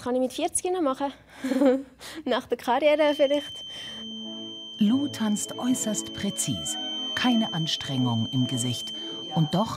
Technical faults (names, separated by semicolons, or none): feedback whistle